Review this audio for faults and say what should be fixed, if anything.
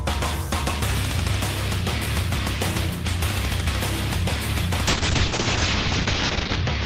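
A call bitrate drop starts at 4.88 s and lasts to the end. The encoder's bit budget collapsed, likely from about 40 kbps to about 7 kbps. Coding turns coarse and the top end is cut at 8 kHz instead of 20 kHz. The sound stays at its coarsest for the final 1.7 s and never recovers. To prevent it, set a higher minimum encoder bitrate and make bandwidth estimation slower to react to brief network dips.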